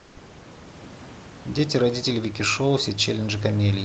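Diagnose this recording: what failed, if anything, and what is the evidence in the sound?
Comfort noise in place of the background, 0 to 0.15 s: steady featureless noise about 3 dB quieter, likely the Opus codec's discontinuous transmission.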